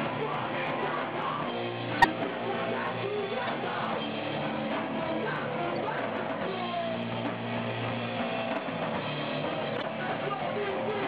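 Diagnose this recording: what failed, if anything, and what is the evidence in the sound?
The codec stage failed, with corrupt frames decoded. Four brief bursts of misplaced energy stand out: 1.98 to 2.06 s, 3.47 to 3.49 s, 5.76 to 5.81 s, and 9.75 to 9.84 s. The first is the loudest, peaking near -10 dBFS. The others sit around -20 to -25 dBFS. Each lasts only a few frames. Damaged bits in the compressed stream made the decoder apply wrong gains or codes, producing short chirps and noise blips.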